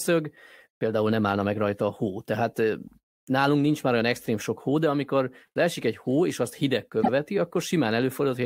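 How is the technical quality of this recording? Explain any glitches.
One glitch stands out, near the end of the speech. From 7.02 to 7.09 s a short stutter occurs: a 78.4 ms slice of sound plays twice in a row. These are repeated frames. That block, which fits three compressed frames of about 26 ms each, was written or sent a second time, so the decoder replayed it and the recording grew by 78.4 ms.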